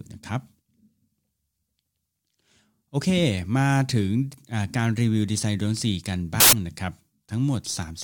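Samples built from the wrong bytes, 6.40 to 6.53 s: misassembled bytes push fast-changing low bits into each value's top, producing a burst of loud, harsh broadband noise.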